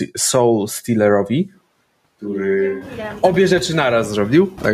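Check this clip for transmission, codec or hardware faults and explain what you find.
Two faults are audible. Throughout, a noise suppressor cuts bands it judges to be steady noise by about 18 dB, frame by frame, so the background dips between phrases. From 1.55 to 2.99 s, ending just before "obie rzeczy", the close microphone likely drops out and a distant microphone takes over. The voice turns hollow and roomy, falls about 5 dB, and background noise sits closer, roughly 25 dB below the speech.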